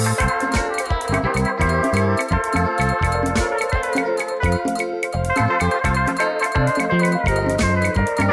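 Nothing in the audio sounds wrong at any point, so there's no fault here to walk through.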